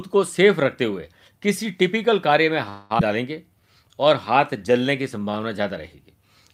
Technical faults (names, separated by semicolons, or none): call audio freeze; skip ahead; jitter buffer slow-down